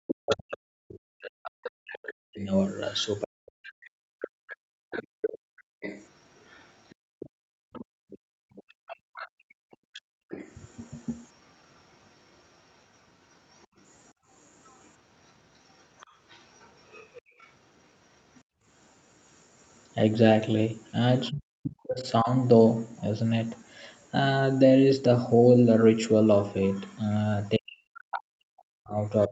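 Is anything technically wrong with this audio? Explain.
Yes, there are echo-canceller problems across much of the clip. From 0.07 to 18.41 s and again from 26.88 s to the end, you can hear the other side's voice leaking through at a low level, about 20 dB under the talker at first and about 15 dB under near the end. It's likely the loudspeaker's playback reaching the mic, with the canceller not fully removing it.

There's also speech suppressed in double talk at 0.23 to 4.24 s (about 3 s of it in total), 21.31 to 22.29 s (roughly 0.7 s), and 27.57 s to the end. The talker's voice ducks hard, around 40 dB at worst. That's likely the canceller seeing both voices at once and pulling everything down.

Then the background gets gated by the echo canceller from 4.56 to 10.29 s and from 14.14 to 18.65 s. The room tone dips by up to about 37 dB in the first stretch, roughly 3 s in all, and by about 29 dB in the second, for about half a second. 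It comes back each time the canceller releases. The top end stopping at 8 kHz comes from the Opus call path and isn't one of these faults.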